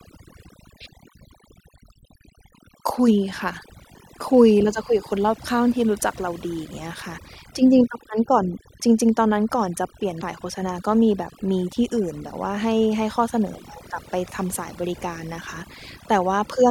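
Overdone noise removal runs through the whole of this speech recording. The reduction was set so aggressively that individual frequency bands near the estimated noise floor are pushed almost to nothing, taking the quieter parts of the voice with them. The background becomes near silence flecked with twinkling specks. Damaged data in a compressed stream appears from 10.18 to 10.23 s as a brief glitch. Corrupted bytes at that point left the decoder unable to read those frames correctly, so it lost sync and had to hunt for the next valid frame header.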